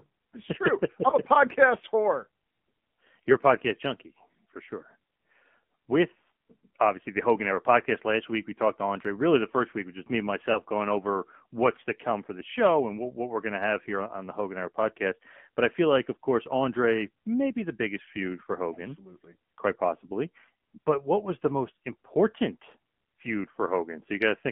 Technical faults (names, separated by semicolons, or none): AMR narrowband mobile codec; lost AMR speech frames